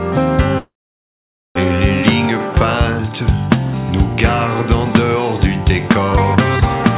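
Packets were likely held up in transit, draining the jitter buffer and causing a call audio freeze from 0.58 to 1.57 s. The receiver stretches the last sound into a brief fading buzz or hiss, then about 0.87 s of silence, before the sound resumes where it stopped with nothing lost, within a band that ends at 4 kHz.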